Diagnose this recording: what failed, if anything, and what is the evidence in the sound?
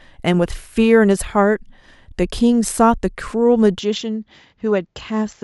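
An input switched to a poorer device at 3.79 s, likely at the driver stage: the speech drops about 5 dB and loses everything above 7.6 kHz, with a new faint noise floor and no gap.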